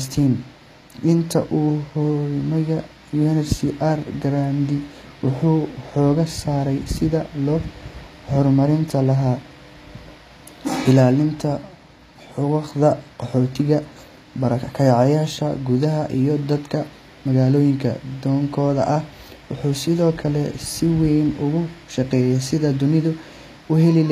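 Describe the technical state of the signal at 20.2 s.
At 20.2 s, as throughout the clip, the treble sounds gritty and metallic, with nothing above 14.9 kHz, likely HE-AAC compression at a low bitrate near 24 kbps. Upper bands are copied from below, so unlike a plain low-pass the highs stay bright but sound false.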